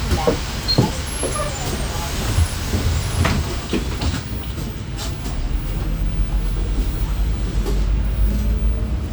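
No technical faults are audible anywhere in the recording.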